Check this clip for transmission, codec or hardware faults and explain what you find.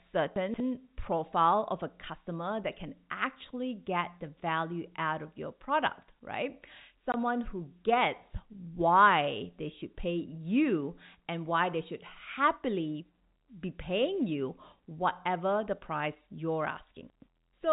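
Yes, there are three transmission faults of two kinds, all carried over a telephone-band line whose narrow sound, with nothing above 4 kHz, fits G.711 A-law coding at 64 kbps.

Chunks out of order, at 0.36 to 0.6 s, just before "profile of a customer", and at 17.1 to 17.28 s, just after "whatever the price you're". A 60 ms block of audio reached the output late and was played after blocks meant to follow it: three blocks late in the first case, two in the second. No audio is missing, but the sequence is scrambled, leaving three hard joins and a brief jumbled moment.

Packet loss filled with silence, at 7.12 to 7.14 s, between "of your product right" and "who gets why they". A single 20 ms packet never arrived, and the receiver played silence in its place. The result is a short, sharp hole in the sound, with abrupt edges on both sides as the signal drops out and snaps back.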